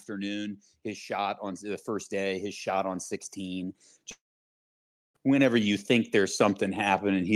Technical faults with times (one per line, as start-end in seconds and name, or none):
0.06-7.36 automatic gain rising
4.11-5.16 long network dropout